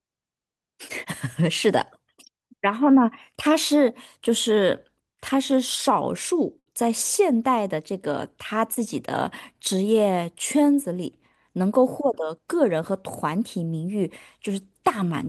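At 6.59 to 6.68 s there is a short stall from a late packet. A packet missed its slot and the jitter buffer ran dry. The receiver held the last sound for about 68 ms until the packet came. Nothing is lost, but the sound drags with a faint buzz. At 8.74 to 8.78 s the same fault recurs, shorter, with a 20 ms fill. Each stall pushes everything after it later.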